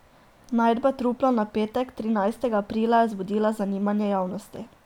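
Nothing in this short speech recording trips any alarms; there's no fault to point to anywhere along the way.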